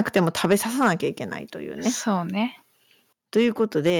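From 0.0 to 0.55 s the loudest syllables carry a harsh, crackling edge. This is microphone overload, likely from an input volume set so high that peaks drove about 8 dB past the converter's limit, so roughly 2% of samples have their tops sheared flat. The same grit returns from 0.81 to 0.92 s, about 6 dB over with around 5% of samples flattened, and from 3.36 to 3.9 s, about 4 dB over with roughly 1% clipped. The distortion rides only on the peaks, and quieter sound in between stays clean.

At 0.53 s, right at the end of the first distorted stretch, the microphone volume is stepped down. Sound and background both drop by about 2 dB in a single step, likely because the call software reacted to the clipping by lowering the device's input gain. A larger drop of about 6 dB follows at 3.9 s, just as the last overload ends. Unlike the overload, this step adds no distortion. The whole signal simply becomes quieter at once and stays at the new level.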